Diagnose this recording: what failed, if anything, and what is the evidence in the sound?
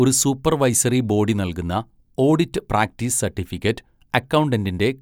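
Nothing in the signal chain has failed: the speech arrives intact and continuous, with no audible disturbance attributable to wiring, conversion, buffering, processing, transmission, storage or playback.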